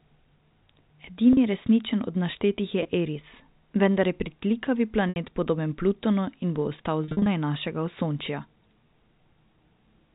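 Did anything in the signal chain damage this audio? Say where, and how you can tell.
Yes. The damage is in the network stage: packet loss with pitch repetition, where the receiver fills each gap by repeating the last pitch period. This gives short held, buzzy patches at 1.33 s (40 ms, just before "resničen od naštetih je"), 2.83 s (20 ms, just after that phrase), 5.09 s (70 ms), and a broken run from 7.04 to 7.26 s. That run totals 170 ms lost across 220 ms, the longest gap being 50 ms. The G.711 A-law telephone band can be heard underneath.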